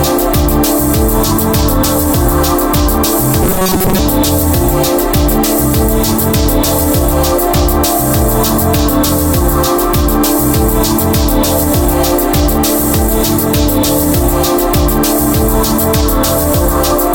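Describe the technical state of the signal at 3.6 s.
At 3.6 s the sound has a rigid, metallic buzz pinned at 188 Hz, running from 3.43 s to 3.98 s, with the underlying sound only loosely traced through it. This is robotic sound from repeated short buffers, likely caused by new audio arriving too slowly: the playback loops a fragment of about 5.3 ms in place of most of the real signal, and that repetition rate fixes the buzz pitch.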